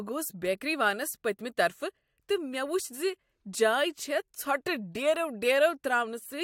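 No technical faults can be heard anywhere in the recording.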